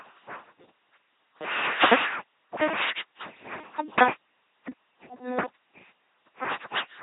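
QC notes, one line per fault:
Throughout: LPC-10 vocoder. Heavy damage leaves a buzzing, mechanical robot voice. Each moment is rebuilt as pure pulse buzz or pure noise through a short all-pole filter, which fits a 2.4 kbit/s coder. A spectrogram shows rigid harmonic combs or flat hiss, and nothing above 3.9 kHz.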